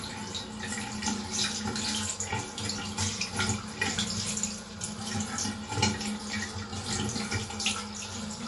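MP3 compression runs throughout the clip: the audio has nothing above 11.3 kHz, and the damage is plainly audible. This likely comes from an MP3 encoder short of bits, which fits a low bitrate near 48 kbps, dropping the treble and discarding weaker frequency detail.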